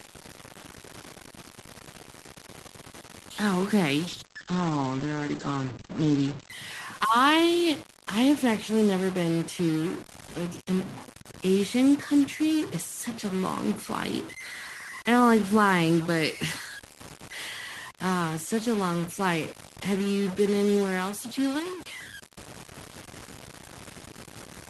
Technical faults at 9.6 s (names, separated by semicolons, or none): stuck bit